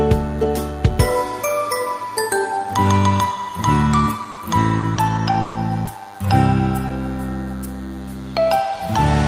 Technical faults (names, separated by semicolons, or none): DECT cordless phone buzz; burst of packet loss; repeated packet loss (robotic sound)